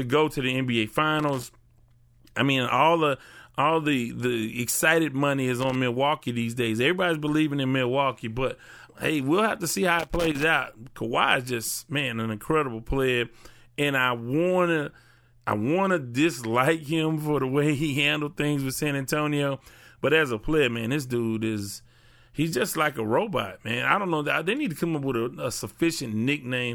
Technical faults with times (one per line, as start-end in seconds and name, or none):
1.19-1.47 loose connector crackle
5.60-5.76 loose connector crackle
9.99-10.43 loose connector crackle